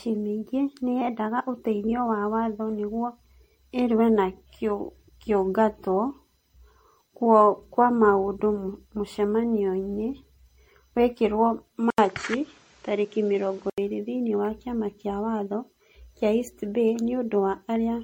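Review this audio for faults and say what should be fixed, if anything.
The speech has a swirly, smeared, hollow quality throughout, with blurred consonant attacks and nothing above 16.5 kHz. This is likely generation loss from around ten MP3 re-encodes near 62 kbit/s. A single encode at that rate would sound cleaner, and each pass added noise on a new frame grid. Keep a lossless master and encode only once.

From 11.90 to 13.78 s the sound turns dull and boxy, with nothing above 8.1 kHz, a faint new noise floor roughly 35 dB down, and an 80 ms silence at the switch. This likely comes from the input switching to a poorer device. A bandwidth-limiting filter would not add the gap or the new noise, and the level stays about the same. Lock the input device before recording.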